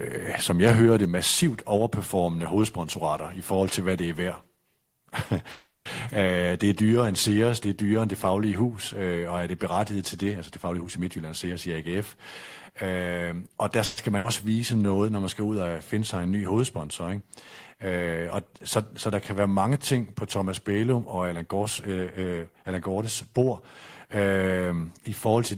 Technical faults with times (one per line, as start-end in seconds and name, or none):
5.51-5.87 call audio freeze
10.68-11.67 jitter buffer speed-up
13.85-13.99 call audio freeze
14.17-14.26 skip ahead
14.49-14.86 jitter buffer slow-down
21.33-22.33 jitter buffer speed-up